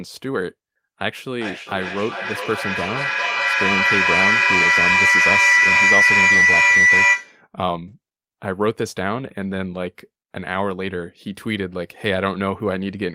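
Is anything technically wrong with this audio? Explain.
Yes. From 1.21 to 7.45 s there is feedback howl: a microphone is picking up a loudspeaker on the same call, and each pass round the loop adds gain. A tone near 2 kHz builds, with repeats roughly every 400 ms, peaking about 8 dB above the speech.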